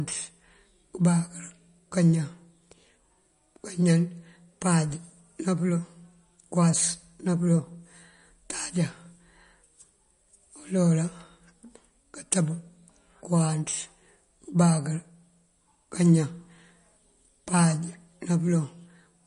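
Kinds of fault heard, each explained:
MP3 compression: The speech throughout has a plainly audible watery, swirling quality, likely from MP3 encoding with too few bits, and the damage fits a bitrate around 40 kbps. The encoder has dropped the treble outright, so a spectrogram shows a hard flat ceiling with nothing above 10.6 kHz. Below it, weak frequency bands flicker in and out from frame to frame as scattered holes and islands. The waveform reveals far less of this than the spectrogram.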